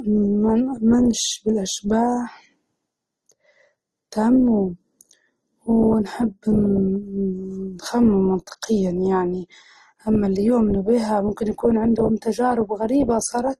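Speech throughout sounds dull and band-limited, with nothing above 12.4 kHz, and its compression artefacts are layered. The artefacts of different codecs are heard together, so the damage doesn't read as a single codec. The cause is likely transcoding between lossy codecs, which fits an MP3 encode at around 40 kbit/s re-encoded to Opus at around 24 kbit/s. The Opus stage spends its bits on the MP3 artefacts while adding its own, and the lower cut-off remains.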